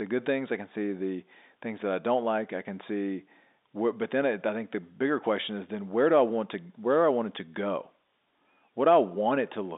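Nothing stood out on listening to this speech recording, which carries the narrow band of an ordinary telephone line.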